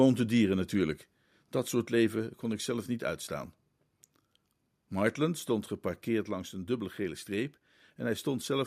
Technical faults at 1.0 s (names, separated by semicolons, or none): microphone volume stepped down